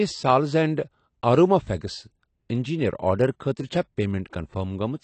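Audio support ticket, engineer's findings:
Speech dull and smeared throughout, with fizzy, warbling sibilants. Nothing above 8.7 kHz. Likely AAC compression, AAC-LC at a low bitrate, fitting about 32 kbps. Coarse quantisation and lowered cut-off strip the highs and leave spectral holes.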